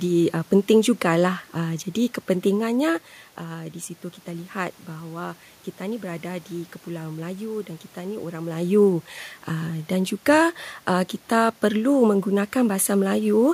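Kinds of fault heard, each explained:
Nothing here points to a system fault; the background noise of the room and the level shifts around 3 s and 8.5 s, where the talker moves relative to the microphone, are just part of the recording.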